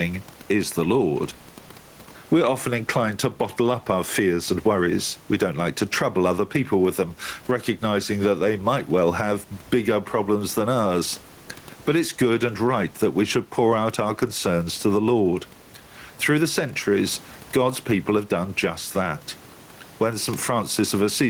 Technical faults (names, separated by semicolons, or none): gain pumping